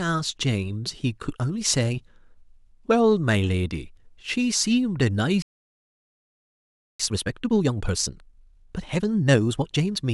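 A playback stall at 5.42 s cuts this speech recording to silence until 7.00 s, a gap of about 1.57 s, most likely because the player ran out of buffered data or its audio thread was blocked, after which the sound resumes where it left off. Time-compressed catch-up follows from 7.00 s to 10.00 s: the speech runs at 1.5 times normal speed but keeps its natural pitch, as the player trims and cross-fades small slices to clear the backlog.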